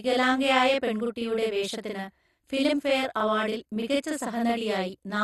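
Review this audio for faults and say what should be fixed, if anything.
Channel delay (doubling), throughout: one channel lags 42.67 ms, fitting a 2048-sample buffer, so the mono sum carries an equal-level slap behind the speech.

MP2 compression, throughout: dull speech with nothing above 12.1 kHz and a gurgling, granular grain, likely from low-bitrate MPEG Layer II switching off starved upper sub-bands.

To prevent both, align the two channels before summing to mono and encode at a higher bitrate or with a more efficient codec.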